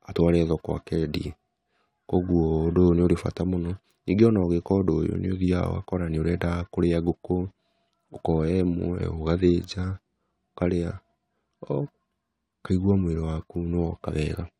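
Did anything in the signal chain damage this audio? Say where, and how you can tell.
No, I can't hear anything in this recording that points to damage at any stage of the chain.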